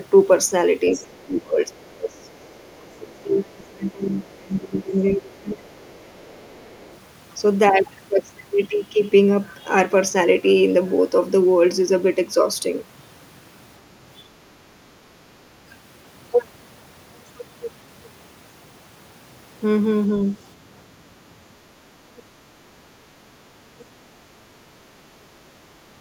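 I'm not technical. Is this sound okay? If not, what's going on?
No. From 0.96 to 6.49 s, and briefly at 14.23 and 15.43 s, the speech is suppressed in double talk: the voice sinks or drops out, likely because both sides spoke at once. Unlike a bad connection, it dips only when the other side talks.

The other side's voice is leaking through faintly at 1.73 to 2.74 s and 5.95 to 6.95 s, with tiny scraps near 22.2 and 23.8 s. It's a second voice, not a repeat of this one.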